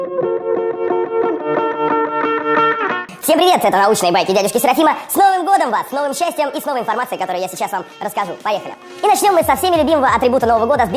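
Throughout the audio, everything runs fast and sounds high. Speed rises about 1.45 times and pitch climbs about 6.45 semitones together. That locked pairing points to a wrong sample rate. It fits material captured near 22 kHz but played back at 32 kHz, with no conversion.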